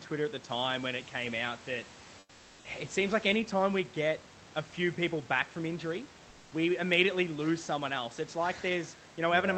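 From 2.19 to 2.63 s, about 0.44 s, the room background gives way to comfort noise in place of the background. It is a steady, featureless hiss about 4 dB quieter, likely because discontinuous transmission halted sending during the speech pause and the receiver synthesised filler noise.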